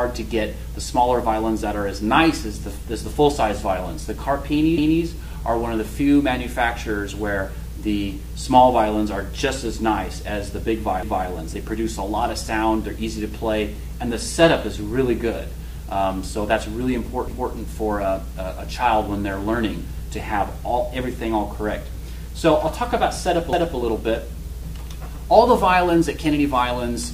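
At 4.78 s, again at 11.03 s, and once more at 23.53 s, you get a quick stutter where a quarter-second of sound plays twice. That's overlapping chunks: the audio went through in 6-second blocks, and each new block started 250 ms before the previous one finished, so the tail of one gets replayed at the join. Each repeat lasts 250 ms, and it comes across as a small hiccup or click right where the blocks meet.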